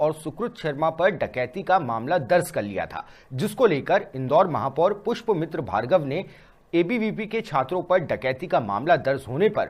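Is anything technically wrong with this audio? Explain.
No, the audio shows no technical faults and the signal holds steady and intact throughout.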